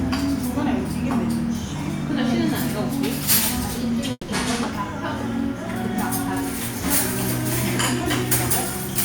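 At 4.11 to 4.30 s there is a call audio freeze. The last sound stretches into a fading buzz or hiss, then briefly silence. Packets were likely delayed, so playback resumes 170 ms late.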